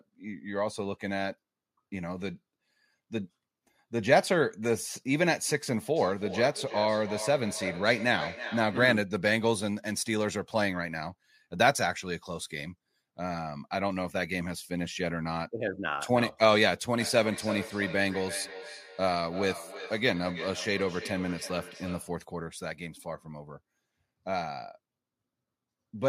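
A speech clip with feedback echo between two devices, from 5.96 to 9.12 s and again from 17.0 to 22.2 s. The sound comes back at a steady interval of roughly 300 ms, thin and ringing, reaching about -10 dB and then about -13 dB below the speech. Room reverberation would blur into a smooth tail. These repeats are distinct and evenly spaced because a second device's playback re-enters a microphone whose echo canceller cannot remove it.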